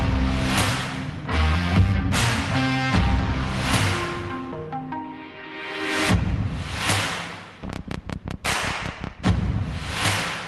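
No technical faults are audible.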